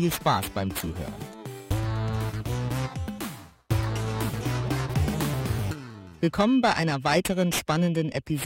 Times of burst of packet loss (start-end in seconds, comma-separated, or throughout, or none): none